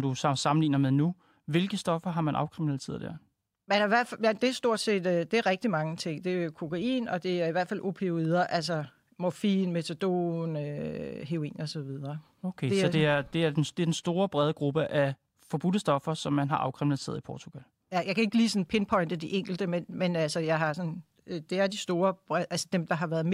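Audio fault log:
Nothing stood out on listening to this speech recording.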